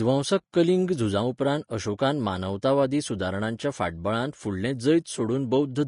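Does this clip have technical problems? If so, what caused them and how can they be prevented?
Yes, there is Vorbis compression throughout, likely at a low setting around 36 kbps: nothing above 10.5 kHz survives, and coarsely quantised treble turns hissy and grainy. Encoding at a higher quality setting would prevent this.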